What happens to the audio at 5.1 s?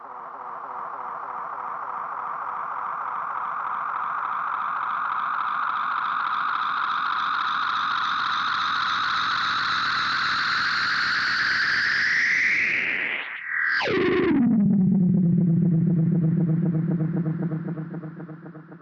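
Nothing goes wrong at 5.1 s; the audio plays through that moment intact, with no dropout, click or distortion.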